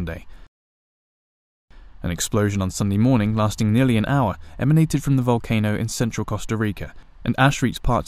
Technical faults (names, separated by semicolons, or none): none